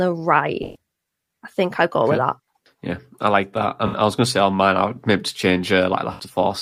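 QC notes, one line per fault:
0.63–0.76 s, AAC frame loss with concealment: a 128 ms smeared, noisy patch, consistent with about six lost frames rebuilt from the last good spectrum.
3.87–3.95 s, AAC frame loss with concealment: between "I like that I" and "I was going to", 64 ms turns phasey as the decoder repeats earlier spectral content.
6.13–6.20 s, AAC frame loss with concealment: a 64 ms smeared gap, suggesting roughly three frames were lost and filled in with the previous spectrum.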